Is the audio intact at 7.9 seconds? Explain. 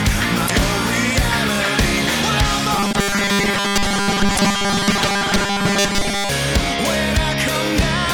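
Yes, the audio is intact at 7.9 seconds, with no dropout, click or other fault at that moment.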